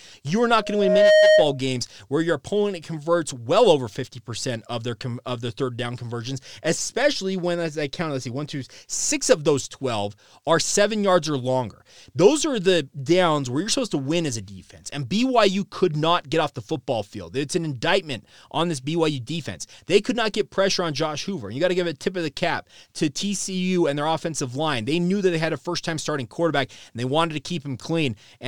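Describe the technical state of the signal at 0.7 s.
At 0.7 s a loudspeaker feedback squeal is building: from 0.60 to 1.59 s, just before "where your opponent converts", a 620 Hz tone swells over roughly half a second to about 10 dB above the speech. That growth, rather than a steady level, marks a runaway microphone-to-loudspeaker loop, not mains hum.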